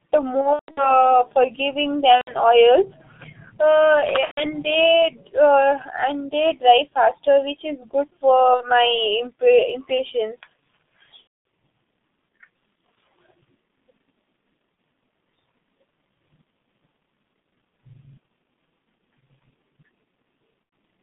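Speech runs through a G.723.1 codec at 6.3 kbit/s, held to a 150 Hz to 3.6 kHz line band. Heavy coding leaves it muffled and hoarse, with smeared consonants. VoIP packet loss concealed by the speech codec breaks in at 0.41 to 1.06 s, 2.16 to 2.33 s, 4.25 to 4.46 s, 8.54 to 8.69 s, 11.22 s and 20.63 to 20.72 s. In each gap the decoder stretches its last sound into a fading buzzy tone or coloured noise. The longest gap, at the start, spreads its losses over about 360 ms.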